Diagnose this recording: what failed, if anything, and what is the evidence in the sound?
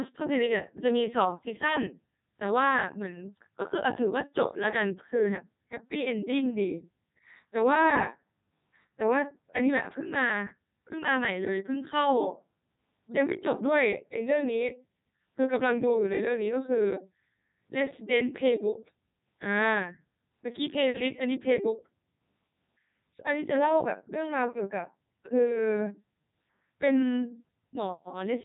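The failure is at the codec stage: the speech has passed through a Codec 2 vocoder for the whole clip. Speech sounds robotic and buzzy throughout. Nothing is present above 3.8 kHz. Damage is heavy, and the texture points to the 3.2 kbit/s mode, the highest Codec 2 offers. The encoder keeps only pitch, voicing, energy and a coarse spectral envelope. The decoder then rebuilds speech from sine waves, so the original waveform and its natural grain are gone.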